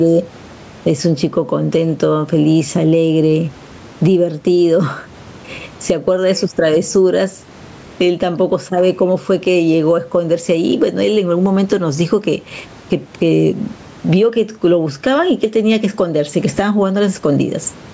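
Throughout the speech, gain pumping: background noise swells by around 15 dB in pauses and ducks under each loud syllable, likely from gain set far too high into a fast limiter, unlike a gate, which silences gaps.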